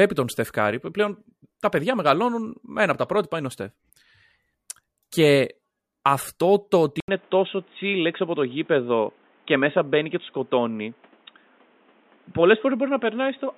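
Input switched to a poorer device at 7.0 s, just after "αυτό το ότι", lasting to the end of the clip. A brief gap of about 80 ms marks the switch. The speech then turns dull and boxy, with nothing above 3.8 kHz. A new, faint background noise appears roughly 35 dB below the speech, while the overall level stays about the same. The likely cause is the recording input changing mid-take to a narrower-band microphone or a headset's call profile.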